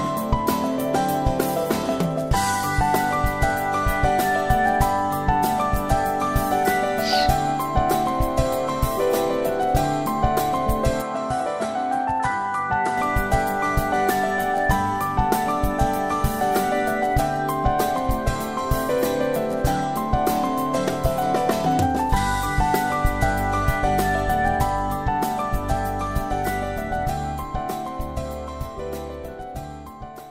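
From 11.02 s to 12.98 s the sound abruptly narrows, with nothing above 11.4 kHz, and returns to full bandwidth at the end of that span. The level falls by roughly 5 dB and a faint new noise floor appears far below the signal, with no gap at either transition. The likely cause is an input switched to a poorer device, whose narrower band and different gain and noise briefly replace the original microphone's.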